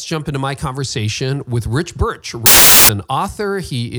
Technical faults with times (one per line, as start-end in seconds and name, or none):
2.46-2.89 samples built from the wrong bytes